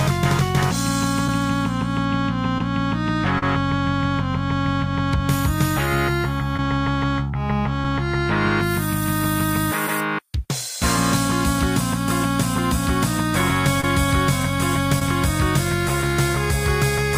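Six brief short concealed packet loss events occur at 1.27, 2.58–2.61, 3.39–3.43, 6.57–6.59, 13.81–13.84 and 14.99–15.02 s. Each time, 10 to 30 ms of audio arrived too late and the decoder patched it by extending the preceding sound, leaving a quick smear or wobble.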